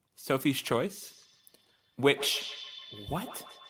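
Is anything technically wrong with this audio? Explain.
Yes. Feedback echo between two devices runs from 1.03 s to the end: another device in the room replays this speech, the microphone recaptures it, and no echo canceller removes it. Each word returns roughly every 150 ms, peaking about 13 dB below the speech.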